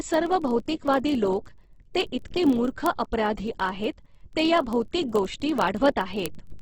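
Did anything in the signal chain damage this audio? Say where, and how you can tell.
Yes, in two places. The codec stage most likely ran this speech through Opus in its music (CELT) mode at a very low rate, around 12 kbps, with heavy damage. Nothing is left above 8.1 kHz, so the sound is wideband at best. With too few bits, the encoder fills bands with folded or noisy content instead of leaving them empty. The voice comes out rough and grainy rather than swirly.

The digital interface or converter stage shows word clock ticks from 0.11 s to 6.59 s. The receiving device ran on its own clock, not locked to the sender, with a mismatch of roughly 700 parts per million. Each time the clocks slip, one sample is dropped or repeated. That produces sharp ticks of uneven strength at a steady rate, about every 30 ms, across nearly the whole clip.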